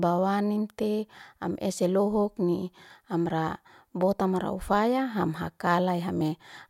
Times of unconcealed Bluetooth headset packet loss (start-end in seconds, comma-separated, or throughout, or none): none